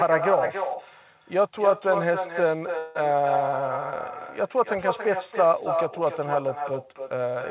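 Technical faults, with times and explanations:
Throughout, echo with no canceller: every phrase returns about a third of a second later, about 6 dB quieter and thinner, because the far end's loudspeaker feeds its microphone and nothing strips that copy before it travels back across the network.
2.78 to 2.97 s, call audio freeze: the sound stalls and the last fragment is stretched into a fading buzz or hiss for about 0.17 s, then resumes where it stopped with nothing lost. This is likely packets held up in transit, draining the jitter buffer.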